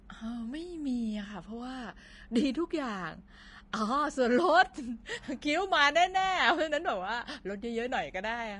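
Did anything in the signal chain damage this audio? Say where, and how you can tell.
Yes. Vorbis compression runs throughout the clip, likely introduced at the codec stage. The speech sounds hissy and grainy, with nothing above 10.6 kHz. The treble has been quantised so coarsely that fine detail becomes noise, which points to a low bitrate around 32 kbps.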